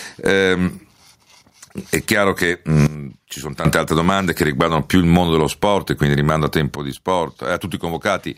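Gain pumping runs throughout, with the gain swinging around 15 dB. Likely cause: fast limiting on excessive gain.

At 2.87 s a sudden gain jump drops speech and noise together by about 20 dB. It holds until 3.65 s, just before "altre domande che riguardano". After "sport quindi rimando a", a second jump cuts about 17 dB from 6.76 s to the end. Both likely come from digital gain changes applied without a ramp.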